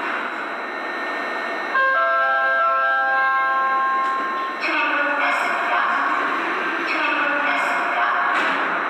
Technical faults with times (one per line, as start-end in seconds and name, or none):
none